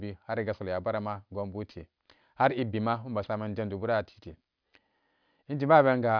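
Throughout the speech, resampling without an anti-alias filter causes aliasing: energy above a 5.5 kHz fold, implying roughly 11 kHz, mirrors back faintly, making sibilants gritty and metallic.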